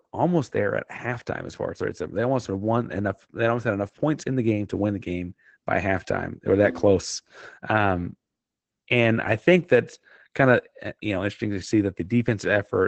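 Throughout, the speech has Opus voice compression: nothing above 8.9 kHz, and coarse SILK coding leaves it muffled and hoarse, which fits a bitrate around 12 kbps.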